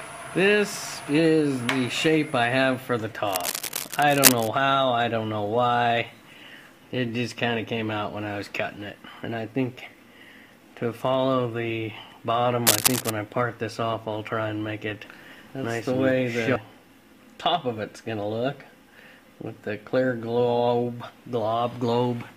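Cable scratch noise appears from 3.26 to 4.49 s and again from 12.67 to 13.1 s: dense, uneven bursts of scratching, about as loud as the sound in the first event and slightly louder in the second, likely from a worn connector whose contact resistance fluctuated as it moved.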